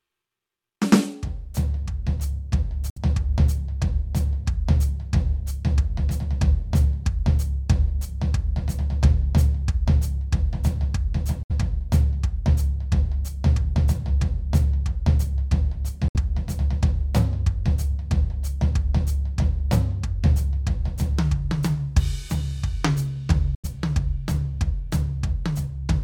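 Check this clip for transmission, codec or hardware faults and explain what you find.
The music drops out four times, at 2.90 to 2.98 s, 11.43 to 11.52 s, 16.08 to 16.16 s and 23.55 to 23.65 s. Each is a short hole of silence. The first three lose about 64 ms and the last about 85 ms. The music comes back further along, as if it kept playing underneath. The likely cause is a Bluetooth dropout: audio packets reached the headphones too late and were discarded. The gaps fit three or four lost packets.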